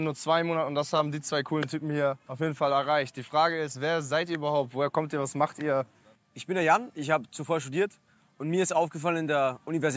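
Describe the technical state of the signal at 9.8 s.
At 9.8 s the signal is intact, with only the normal call microphone processing audible in its band-limited sound, nothing above 8 kHz.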